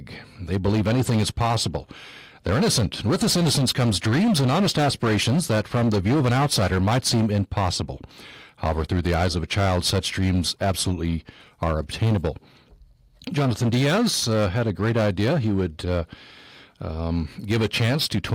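Speech with hard clipping throughout. The signal is driven about 8 dB past what the stage can pass. Its peaks are cut flat on roughly one sample in seven. Those flat tops add high harmonics. Every loud syllable carries a harsh, fuzzy edge.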